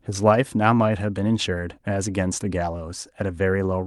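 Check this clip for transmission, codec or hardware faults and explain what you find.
No faults found.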